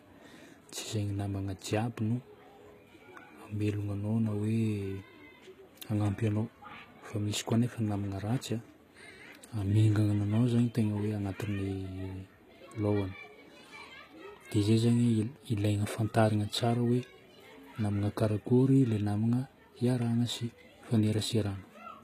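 A speech clip with plainly audible HE-AAC compression damage throughout: the treble sounds rebuilt, so s sounds turn gritty and lispy, and nothing comes through above 14.9 kHz. This points to a very low bitrate, likely around 20 kbps. Unlike a plain low-pass, the high band is present but copied up from lower bands.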